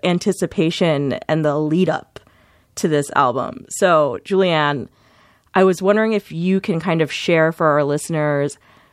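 Speech, with no audible faults.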